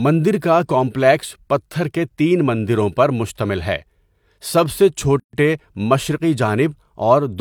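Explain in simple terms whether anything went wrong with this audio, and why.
A gap at a join of encoded pieces appears at 5.20 to 5.33 s: the speech drops into silence for about 135 ms, then resumes where it stopped. The audio was compressed in separate chunks, roughly 6 s long, and stitched together without trimming the silent padding each chunk carried.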